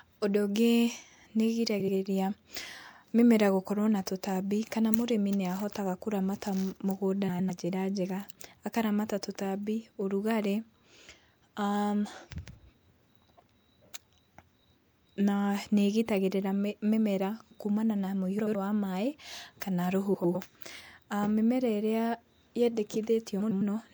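Frames out of order occur five times in the speech: 1.80–1.95 s, 7.28–7.51 s, 18.39–18.55 s, 20.14–20.36 s and 23.40–23.62 s. Each time, two adjacent blocks of frames were decoded in swapped order. The blocks are 78.4 ms long at the first and third events and 104.5 ms at the rest, which fits runs of three and four frames. Each stretch plays as a brief garbled flutter. No time is lost.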